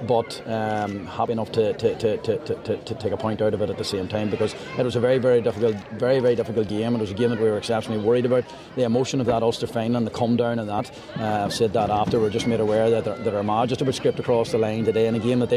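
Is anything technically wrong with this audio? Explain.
Yes. There is damaged data in the compressed stream, heard as brief blips at 1.28 s, 6.69 s and 10.78 s. At each point, corrupted bytes make the decoder misread frames. It loses sync and hunts for the next valid frame header, producing a short glitch.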